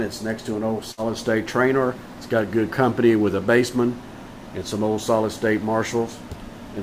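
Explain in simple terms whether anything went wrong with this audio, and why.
A burst of packet loss occurs from 0.91 to 1.00 s. A run of audio chunks arrived too late to play, so the player held the last sound and faded it for 60 ms. It then jumped ahead, and 60 ms of the original is missing.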